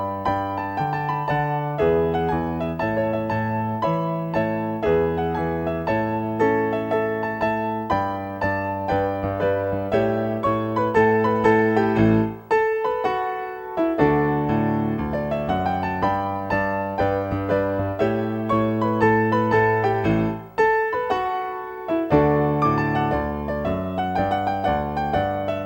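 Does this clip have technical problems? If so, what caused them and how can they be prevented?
Yes: video or display buzz runs throughout, as a screen or video cable couples into the audio path, producing a 59.94 Hz field-rate buzz with hash above it and a thin 15.7 kHz line-rate whine, about 35 dB below the sound. Routing audio cables away from video lines and displays, using balanced connections, and grounding the equipment to a shared point would prevent it.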